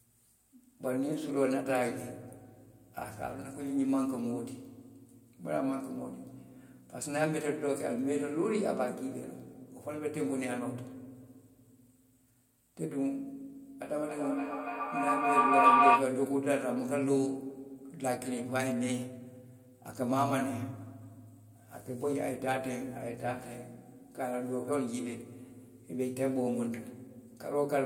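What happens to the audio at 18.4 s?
Nothing goes wrong at 18.4 s: the speech plays through that moment intact, with no dropout, click, distortion or other fault to be heard.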